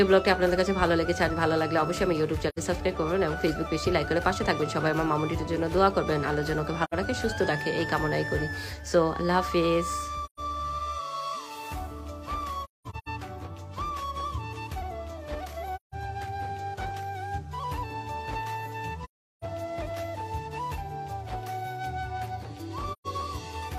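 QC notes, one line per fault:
2.49–2.59 s, AAC frame loss with muting: a soft fade into silence and back lasting about 85 ms, consistent with two lost frames zeroed by the decoder.
6.84–6.94 s, AAC frame loss with muting: another smooth 85 ms hole where overlapping windows taper the sound out and in around two muted frames.
10.25–10.40 s, AAC frame loss with muting: a gentle 128 ms dropout, which fits about three frames whose spectrum was set to zero.
12.64–13.08 s, AAC frame loss with muting: a stuttering series of soft gaps totalling 341 ms, the longest about a fifth of a second, from scattered frames muted by the decoder.
15.75–15.95 s, AAC frame loss with muting: a soft-edged silence of about 171 ms, faded by window overlap, pointing to roughly four consecutive frames lost and muted.
19.04–19.44 s, AAC frame loss with muting: the longest hole, 384 ms of near silence with smooth edges, consistent with a run of around nine lost frames.
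22.92–23.07 s, AAC frame loss with muting: a 128 ms fade out and back in, matching about three frames zeroed after being lost.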